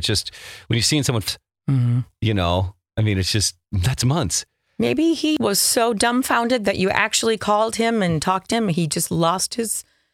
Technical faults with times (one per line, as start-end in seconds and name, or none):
1.28 compressed frames skipped
5.37 compressed frames skipped
8.52 compressed frames skipped